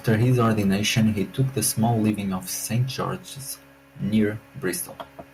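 From 0.07 to 0.61 s the loudest syllables turn harsh and crackly, their peaks flattened; the microphone's input level is likely set about 4 dB beyond what the converter can hold, a microphone overload that squares off a few percent of the samples. The same gritty edge returns from 0.97 to 1.09 s, about 3 dB over with a somewhat larger share clipped, and again from 1.40 to 2.10 s, about 2 dB over but touching only a small fraction of samples.

At 2.10 s, right after that distorted stretch, speech and background both drop abruptly in level, by about 3 dB in a single step with no fade. This is a microphone volume step-down, likely the call software reacting to the clipping by lowering the device's input gain at once.

From 4.16 to 4.23 s one brief peak still crackles slightly. This microphone overload is about 1 dB over the limit, with a small share of samples cut off.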